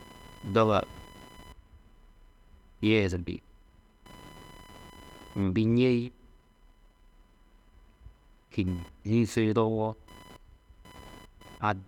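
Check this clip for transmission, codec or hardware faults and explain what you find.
A hardware fault runs through the whole recording: computer activity noise. Beneath the speech sits a faint buzzing, chirping texture pulsing at around a thousand times a second, roughly 30 dB below the voice, rising and falling with no relation to what is said. It comes from the computer's processor, graphics or mouse load disturbing the ground shared with the audio circuit.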